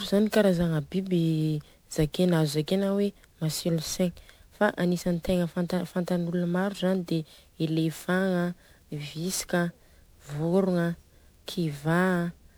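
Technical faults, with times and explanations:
Throughout, generation loss: the speech sounds swirly, hollow and smeared, with softened consonant attacks, more damage than one 128 kbit/s-ish MP3 pass explains. The likely cause is around ten repeated encodes, each requantising on a shifted frame grid, so noise and spectral holes pile up.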